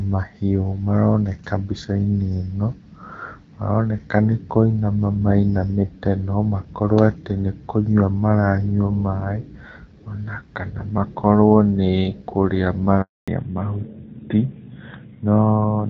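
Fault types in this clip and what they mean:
Handover gap: Right after "kana makorwo nĩ kũrĩa" the speech fades out within a few tens of milliseconds and stays silent from 13.02 to 13.28 s, a 260 ms hole, while the call is passed from one network to another and no speech frames get through. Unlike scattered packet loss, there is one clean silence with no smeared or repeated fragments, and the sound changes character immediately after it.
Fallback to narrowband: From 13.28 s to the end, nothing above 4 kHz survives, so sibilants lose their hiss and the speech turns duller and rougher. The call has dropped from the wideband HD Voice codec, heard before the break with only light coding damage, to an older narrowband codec, in this case most consistent with AMR-NB at around 12.2 kbit/s. What separates this from a simple low-pass filter is that the band cut arrives abruptly, right at the handover gap, and holds unchanged from then on.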